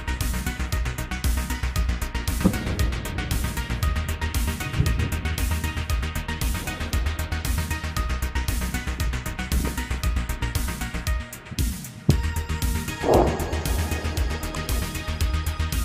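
No technical faults are audible.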